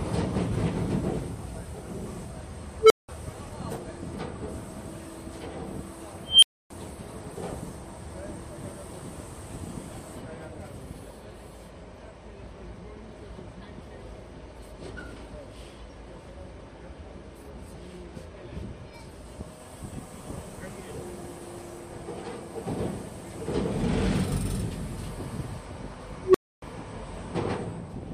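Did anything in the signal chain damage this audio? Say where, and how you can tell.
Yes: an unstable filter in the processing stage, whose recursive feedback grew without limit. At 2.80–3.09 s and 26.20–26.62 s a tone near 400 Hz, and at 6.25–6.70 s one near 3 kHz, swells within 0.1–0.18 s, clips, then overflows into 0.19–0.28 s of silence until reset.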